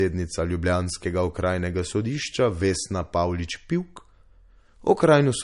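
From the very start and all the way through, the speech sounds dull and swirly, with nothing at all above about 10.6 kHz. That hard ceiling fits a low-bitrate MP3 around 44 kbit/s. Yet the file itself behaves like a high-bitrate one, so this is likely low-bitrate audio saved at a high bitrate. The second pass can't bring back the missing top end or undo the first encoder's artefacts.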